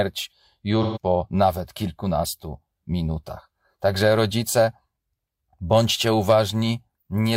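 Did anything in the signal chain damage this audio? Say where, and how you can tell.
Yes, at the codec stage: there's AAC frame loss with concealment from 0.82 to 0.98 s. That stretch goes smeared and phasey as the decoder rebuilds missing spectrum from the last good frame. The 128 ms gap fits about three lost frames.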